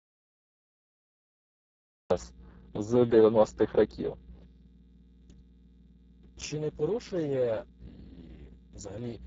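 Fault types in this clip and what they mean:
Mains hum: a steady 60 Hz tone with low harmonics, about 20 dB below the speech, showing as unbroken horizontal lines at the bottom of the spectrogram.
Speex codec: heavy low-bitrate CELP coding makes the speech hoarse and noisy, and the spectrogram shows smeared texture and nothing above 7.7 kHz.
Audio dropout to silence: the clip opens in silence until 2.1 s, a flat line with no room tone, likely from a lost input.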